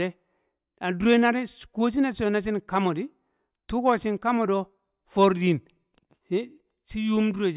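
Nothing in the recording stood out as a technical problem on listening.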